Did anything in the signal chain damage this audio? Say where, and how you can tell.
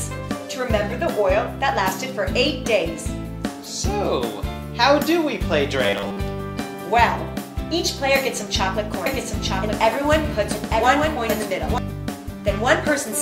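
Yes. From 5.84 to 6.19 s the sound turns into a rigid, metallic buzz at 100 Hz, with most of that stretch repeated rather than new. This is robotic sound from repeated short buffers, likely at the driver or buffer stage: roughly 10 ms chunks were replayed while fresh audio was skipped.

From 9.06 to 11.78 s a doubled audio track appears. A full-band copy, about 5 dB quieter, trails roughly one second behind, dry and without room colour, starting and stopping abruptly. This likely comes from a slower second capture path or an edit holding two offset copies.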